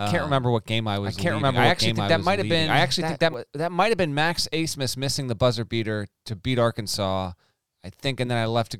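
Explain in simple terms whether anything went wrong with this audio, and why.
From the very start until 3.34 s, just before "that might have been", there is a doubled audio track: a second copy of the speech trails about a second behind, roughly as loud, likely captured twice. Unlike an echo, it doesn't fade or sound roomy, and it cuts off abruptly.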